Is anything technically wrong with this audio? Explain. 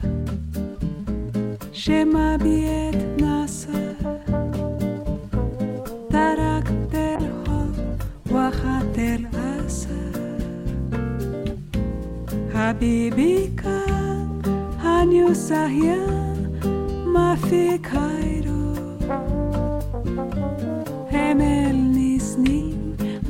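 Yes. Call bitrate drop, 7.16 to 9.51 s: the encoder's bit budget collapsed, consistent with roughly 96 down to 15 kbps, so the sound turns coarse, watery and muffled, with its highs cut, until it recovers.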